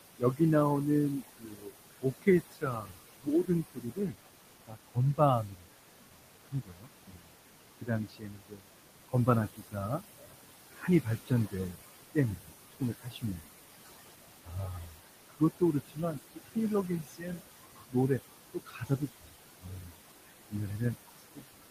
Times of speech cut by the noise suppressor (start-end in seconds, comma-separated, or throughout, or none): 0.00-13.56, 14.44-21.70